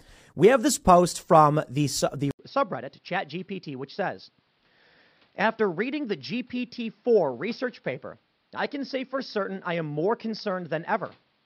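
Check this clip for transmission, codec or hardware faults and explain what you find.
Input switched to a poorer device at 2.31 s, likely: after an 80 ms silence the speech turns dull, with nothing above 5.5 kHz, a lower level and faint new background noise.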